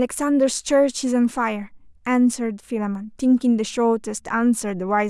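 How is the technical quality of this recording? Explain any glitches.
No glitches are audible; the recording carries no dropouts, clicks, distortion or timing faults to explain.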